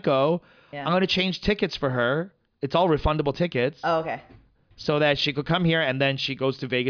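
Nothing in the recording stood out as a technical problem on listening.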